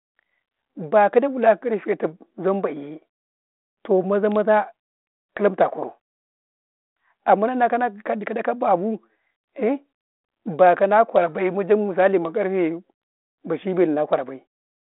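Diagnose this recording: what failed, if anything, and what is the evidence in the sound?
Nothing stood out on listening: the speech comes across as an ordinary narrowband telephone path through a 32 kbit/s G.726 link, with only the light coding texture expected at that rate.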